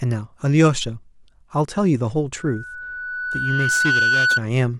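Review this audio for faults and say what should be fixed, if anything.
A loudspeaker feedback squeal runs from 2.37 s to 4.41 s: the microphone is picking up the loudspeaker it feeds, and at about 1.5 kHz the loop gain climbs past one. That single tone builds by itself over roughly one and a half seconds into a steady squeal that ends up about 5 dB louder than the speech. Reduce loop gain at that frequency by lowering monitor level, repositioning the microphone, or notching around 1.5 kHz.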